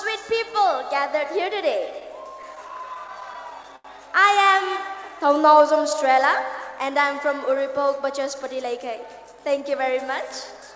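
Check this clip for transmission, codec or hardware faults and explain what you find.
Three timing faults from the network side show up, all in how the audio is paced. The sound is band-limited with nothing above 8 kHz, which fits a G.722 call path.

Repeated stalls (stutter), 2.00 to 3.87 s: the audio catches and drags 13 times, the longest hold about 84 ms, roughly 206 ms stretched in total with nothing lost. Packets arrived late, the jitter buffer kept emptying, and the receiver extended the last sound each time.

Jitter buffer slow-down, 4.91 to 6.13 s: the sound runs at 94% speed with unchanged pitch, drawn out by 83 ms overall. With its buffer running low or its target delay just raised, the receiver built up a reserve by repeating single pitch periods and bits of pauses.

Jitter buffer speed-up, 8.19 to 9.74 s: the audio sounds hurried, running at 107% speed at the same pitch, with about a tenth of a second cut. 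The buffer held more audio than it needed, so the receiver trimmed short pitch-period pieces repeatedly.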